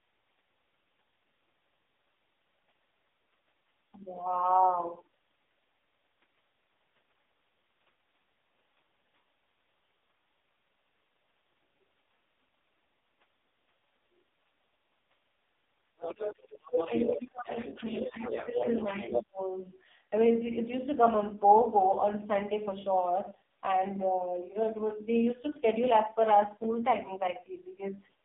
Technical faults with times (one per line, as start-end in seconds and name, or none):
0.00-28.25 AMR narrowband mobile codec
15.99-19.22 other side's voice leaking through
16.87-17.51 speech suppressed in double talk
17.79-18.24 speech suppressed in double talk
18.50-18.65 speech suppressed in double talk
19.08-19.40 speech suppressed in double talk
26.64 repeated buffer